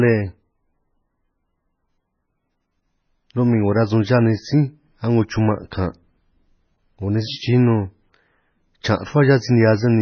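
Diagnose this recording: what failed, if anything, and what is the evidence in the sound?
The codec stage failed: heavy MP3 compression likely starved the encoder of bits, which fits a bitrate around 15 kbps. The speech has nothing above 6.5 kHz throughout, and weak spectral lines flicker between frames, leaving a watery, swirly texture and smeared consonant attacks.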